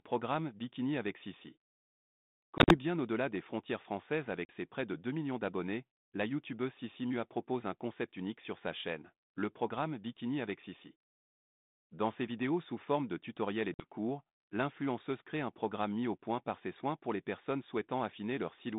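Speech over a telephone band of roughly 150 Hz to 3.7 kHz, with light codec noise consistent with 32 kbit/s G.726 ADPCM, is broken by abrupt silent holes at 2.58–2.76 s (80 ms missing across 120 ms, longest gap 40 ms), 4.45–4.51 s (40 ms) and 13.74–13.86 s (50 ms). Each is packet loss on an ADPCM call: missing packets become silence, and the decoder's adaptive predictor and step size drift from the sender's, so speech resumes briefly distorted before settling.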